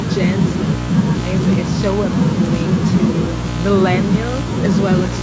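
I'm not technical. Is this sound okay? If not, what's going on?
Yes, this recording is fine and has no technical problems. It went through a call's usual microphone processing, which trims the deepest bass and leaves out the very highest sounds above 8 kHz, as is normal for a call.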